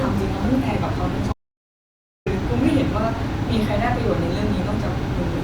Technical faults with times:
1.33-2.26 audio dropout to silence

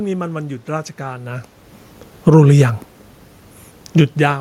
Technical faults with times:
2.13-2.52 automatic gain falling
2.46-2.91 automatic gain rising

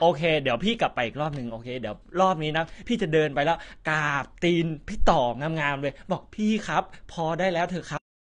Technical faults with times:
0.00-8.31 AAC compression

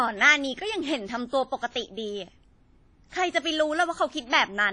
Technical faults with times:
0.00-4.72 WMA compression

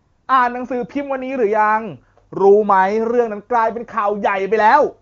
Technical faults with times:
0.00-0.27 AMR comfort noise

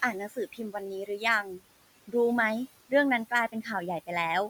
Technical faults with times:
0.00-4.50 noise suppressor artifacts
0.12-1.61 speech cut by the noise suppressor

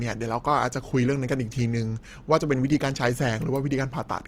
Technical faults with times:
0.00-4.27 Opus compression

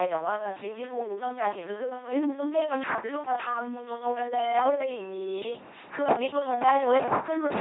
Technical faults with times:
0.00-7.61 LPC-10 vocoder

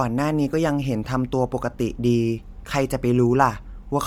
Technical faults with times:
0.00-4.07 Bluetooth LC3 compression

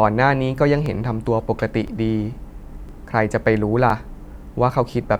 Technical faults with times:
0.86 overlapping chunks
1.88 overlapping chunks
2.89 overlapping chunks
3.90 overlapping chunks
4.91 overlapping chunks

